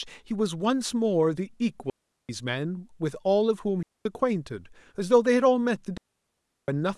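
Speech, with three digital wireless dropouts at 1.90–2.29 s, 3.83–4.05 s and 5.97–6.68 s: the receiver mutes cleanly into near silence, no noise bursts around the holes.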